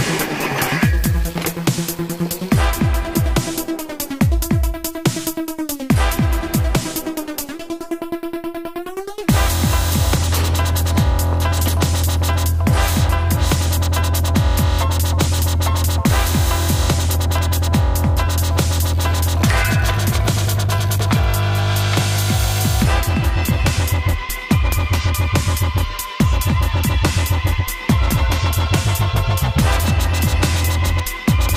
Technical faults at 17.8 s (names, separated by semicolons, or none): periodic USB or driver dropouts